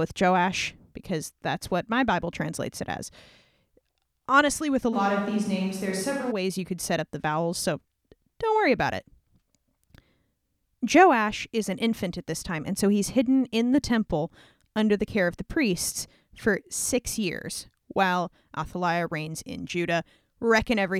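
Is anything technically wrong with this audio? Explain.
Yes. A switch to a distant microphone occurs from 4.95 to 6.3 s, just after "with a" until "ways you could set". The close microphone's signal likely dropped out, leaving a far pickup: speech turns suddenly roomy and thin, about 5 dB quieter, with room noise rising, then snaps back.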